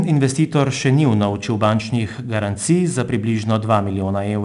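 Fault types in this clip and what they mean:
4-bit ADPCM compression: each sample is coded as a coarse 4-bit step from a predicted value, so gritty hiss rides on the speech and rises with its level throughout. Nothing is heard above 10.6 kHz, which fits roughly 88 kbps.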